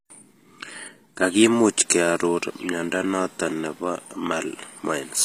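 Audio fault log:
throughout, HE-AAC compression: the speech was likely coded with a low-bitrate codec, around 24 kbps, that keeps only the lower spectrum and fills in the treble by copying lower bands upward. That makes s sounds gritty and metallic, with nothing above 15.5 kHz.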